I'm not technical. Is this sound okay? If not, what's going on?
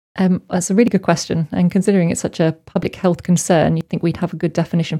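No. There are three tiny skips, at 0.88, 1.85 and 3.81 seconds, where the sound jumps forward by a sliver of roughly a fiftieth of a second. This is audio missing between chunks: the recording was likely made in one-second pieces, and a little was lost at each handover. Unlike a dropout, there is no gap of silence. The two sides are joined directly, so it sounds like a hiccup rather than a pause.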